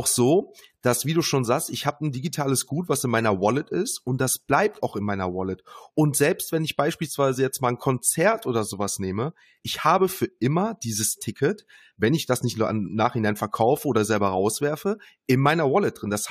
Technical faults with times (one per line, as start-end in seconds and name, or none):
11.32 compressed frames skipped